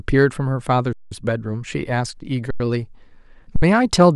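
Speech freezes into flat silence with almost no click at 0.93–1.12 s (186 ms), 2.51–2.60 s (93 ms) and 3.56–3.62 s (63 ms), then resumes where it stopped. This is an underrun with held sample: the converter held its last value while the buffer sat empty, with gaps that fit 8192- and 4096-sample blocks.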